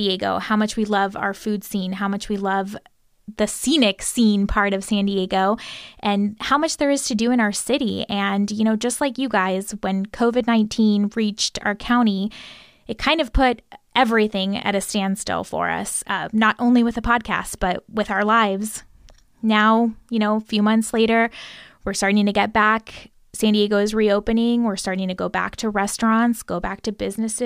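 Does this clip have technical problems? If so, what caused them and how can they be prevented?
Yes. From about 3.71 s, right after "much we love the", to the end of the speech, there is crude rate conversion: a 48 kHz to 44.1 kHz change done by linear interpolation without a proper filter. It leaves a faint, gritty, inharmonic fizz, about 35 dB below the speech, that rises with loud and bright sounds. Unlike clipping distortion, it doesn't depend on peaks hitting a ceiling. It persists at moderate levels and never fits the voice's harmonics. Prevent it by resampling with a band-limited, properly filtered converter.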